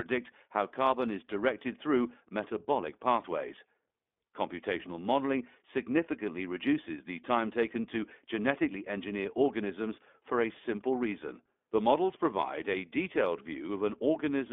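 From start to finish the speech carries iLBC codec coloration, and the damage is plainly audible. The audio is confined to a telephone band of roughly 250 Hz to 3.5 kHz, so it loses both low-end body and high-frequency air. Each short frame's excitation is coded independently, which gives the voice a rough, slightly synthetic buzz. That texture fits iLBC's 20 ms frame mode at 15.2 kbps.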